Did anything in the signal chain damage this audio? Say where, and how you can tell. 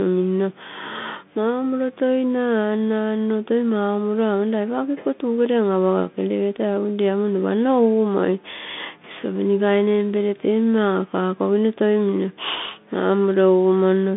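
Yes. A Bluetooth CVSD headset codec, at the codec stage, degrades the speech for the whole clip. The band runs only from about 150 Hz to 3.6 kHz, and the damage is plainly audible. CVSD sends one bit per sample telling the decoder to step up or down, with an adaptive step size, which fits a 64 kbps stream. Loud, fast high-frequency energy outruns that step and distorts, s sounds turn scratchy, and a granular hiss sits under the speech.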